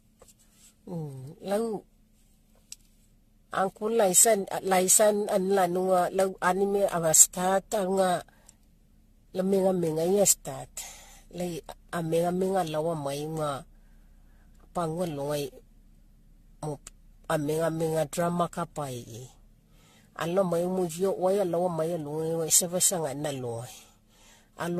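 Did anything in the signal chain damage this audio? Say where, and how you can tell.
Yes. Throughout the speech the sound is swirly and hollow, with consonant attacks smeared and a watery, phasey texture more severe than one lossy encode would produce, and nothing above 14 kHz. This points to the codec stage and is likely generation loss: the audio has been through roughly ten rounds of decoding and re-encoding with an AAC-style codec at about 64 kbit/s, each pass requantising on a shifted frame grid so noise and spectral holes accumulate.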